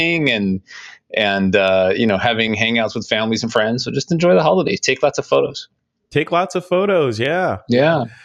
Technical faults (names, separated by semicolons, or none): noise suppressor applied to music or sounds